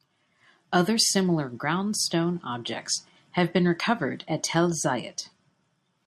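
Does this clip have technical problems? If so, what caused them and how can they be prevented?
No, there are no technical faults to hear in this speech clip. With nothing wrong, there is no cause to trace and nothing that needs preventing.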